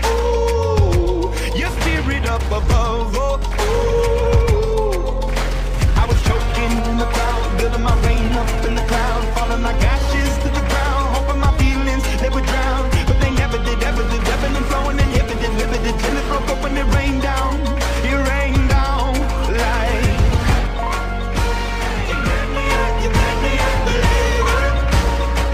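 Throughout, the sample rate was raised from 22 kHz to 48 kHz by straight-line interpolation, a weak filter. The resulting imaging from linear upsampling dulls the top of the band and leaves a mirrored copy around 11 to 22 kHz, roughly 35 dB down, heard as faint metallic shimmer.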